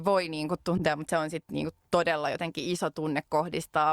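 At 0.78 to 0.83 s, between "voi niin kuin" and "mutta se on sitten", a brief chirpy burst of noise cuts into the speech, peaking at around -15 dBFS. This is a corrupt frame decoded: flipped bits in a single compressed frame made the decoder play wrong gains and codes, scattering energy across incorrect frequencies.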